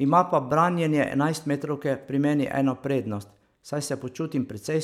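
Nothing goes wrong anywhere in this short stretch of speech, so there isn't a single moment to point to.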